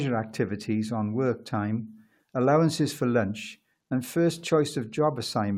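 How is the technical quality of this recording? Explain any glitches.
No glitches or technical faults can be heard anywhere.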